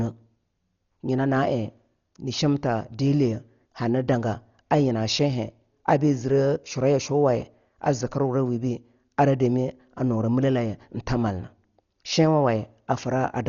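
From start to finish the speech is dull, with nothing above about 6.9 kHz, and a rough, fluttering noise clings to voiced sounds. This is likely Dolby Digital compression at a very low bitrate, consistent with about 40 kbps, where many frequency lines lose their detail and are filled with noise.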